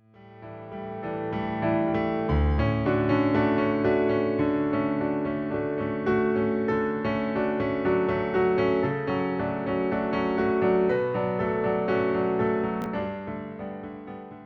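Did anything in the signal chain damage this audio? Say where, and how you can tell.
Yes: chunks out of order at the buffer stage, 12.82 to 12.86 s. A 20 ms chunk lands one slot late, giving a brief jumbled blip with three hard joins.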